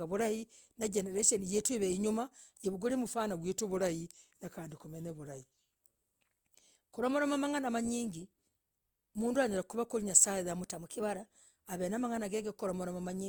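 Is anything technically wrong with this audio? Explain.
Yes, there are two drift correction steps in this speech. From 3.34 to 5.81 s it slows by 5.5% and drops about 98 cents, nearly a semitone. From 10.63 to 11.26 s it speeds up 5.5% and rises about 93 cents. Each time it snaps back, likely from clock-sync software stepping the playback rate to rebalance its buffer.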